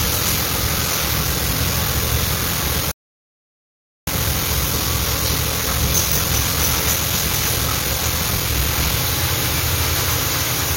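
From 0.0 to 8.97 s a block size mismatch (padded) fills each short block with zeros, giving a 43.1 Hz buzz, consistent with 1024-sample reads, and slowing playback to 0.861 times speed. At 2.91 s a rebuffering stall cuts to silence until 4.07 s, then resumes where it stopped, adding about 1.16 s.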